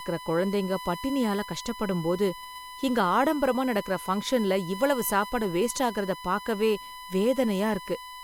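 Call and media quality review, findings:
USB whine, present throughout the speech, steady tone at 1 kHz, strongest there, roughly 15 dB below the voice. Likely component: USB headset or interface power/ground path picking up 1 ms bus frame current draw. Distinguishing point: pitch locked at exactly 1 kHz, not the 50/60 Hz harmonic series of mains hum, and unlike feedback it neither grows nor tracks the voice.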